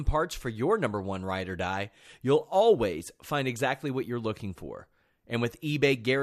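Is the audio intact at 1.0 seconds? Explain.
Yes, the speech at 1.0 seconds plays through cleanly, with no dropout, click, distortion or other fault at that moment.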